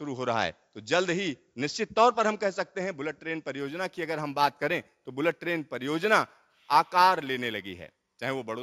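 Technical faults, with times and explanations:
3.59–8.62 s, imaging from linear upsampling: fits a 16 kHz source line-interpolated to 44.1 kHz. The top is dulled, with faint mirror images at 8–16 kHz, about 30 dB down, shimmering rather than folding back like aliasing.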